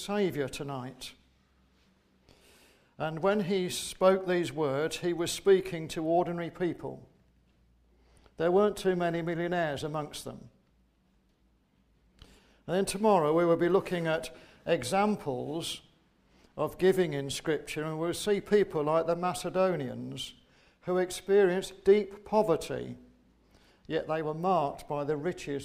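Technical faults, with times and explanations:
Nothing stood out on listening; no technical problem could be heard anywhere in the recording.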